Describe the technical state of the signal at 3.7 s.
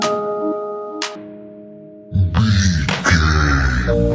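At 3.7 s the signal is in a wrong sample rate span running from 1.15 s to the end, played at half speed and one octave low, which fits 32 kHz material read out at 16 kHz; a spectrogram shows every component halved in frequency and stretched in time.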